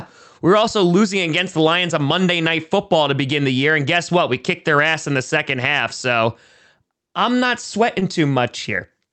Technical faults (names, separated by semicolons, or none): short concealed packet loss